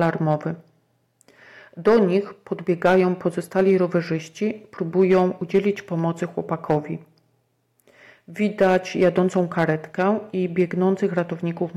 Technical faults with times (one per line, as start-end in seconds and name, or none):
0.00-11.77 hard clipping